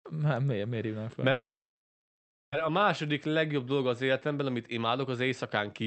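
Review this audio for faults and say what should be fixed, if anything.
A call audio freeze runs from 1.31 to 2.54 s, just after "miért miért hívnám fel". The last sound is stretched into a short, fading buzz. Then about 1.1 s of silence follows. The speech picks up exactly where it stopped. Nothing is cut out. Instead, a 1.21 s gap is inserted, so everything after it plays that much later. The likely cause is packets held up in transit, leaving the jitter buffer empty.

To prevent it, improve the network path's stability, or let the jitter buffer grow adaptively when delays rise.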